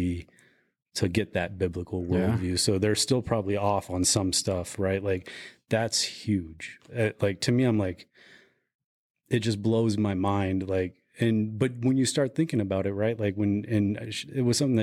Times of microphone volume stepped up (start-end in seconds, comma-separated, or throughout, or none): none